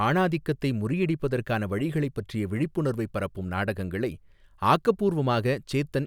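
No technical faults can be heard anywhere in this speech recording. At no point does anything in the sound stand out as going wrong.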